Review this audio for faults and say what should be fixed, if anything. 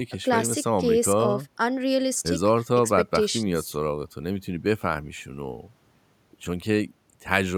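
Nothing needs fixing: the speech signal is technically sound, with no fault present anywhere in the recording.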